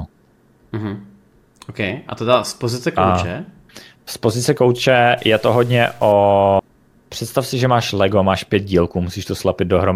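From 5.18 to 6.12 s, just after "pozice kouče", the speech turns distorted, and quiet gaps fill with hiss. This is a stuck bit, likely one data bit held fixed, offsetting samples by about -40 dBFS. A spectrogram shows broadband smearing; the waveform looks jagged.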